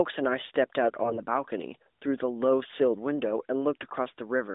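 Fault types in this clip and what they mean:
AMR bit errors: On a weak mobile link, flipped bits in the less protected parts of AMR-NB frames misplace excitation pulses and skew fine pitch, gain and spectral values. The speech keeps its rough level but turns hoarse and gargly at 1.02–1.20 s and 3.81–3.96 s, with the second burst harsher. On a spectrogram, harmonics within the 250 Hz–3.7 kHz band smear into scratchy, broken texture. The waveform keeps its envelope and roughly its pitch periods.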